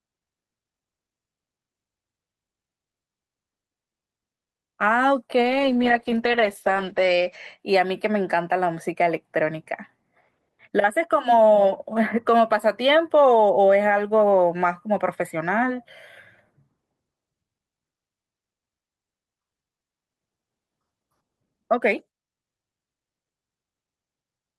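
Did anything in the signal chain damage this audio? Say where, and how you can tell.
Yes. A call bitrate drop hits the codec from 5.42 to 7.65 s. The speech turns rough and muffled. The top end stops at 8 kHz instead of 20 kHz, worst for 1.95 s. That fits a fall from 32 to 10 kbps.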